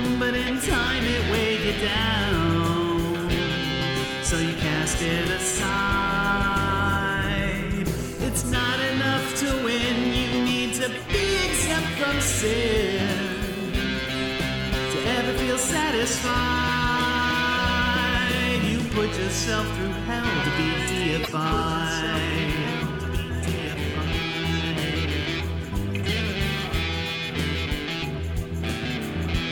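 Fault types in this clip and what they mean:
Broken MP3 bit reservoir: a disturbance lasting about 60 ms, from 21.23 s to 21.28 s, spanning roughly two frames at the 26.1 ms frame length, where the audio jumps ahead. The likely cause is missing MP3 frames: later frames borrow bits stored in earlier ones, so after the gap the decoder looks back for that borrowed data, reads bytes belonging to a different frame, and produces garbage until the stream resynchronises.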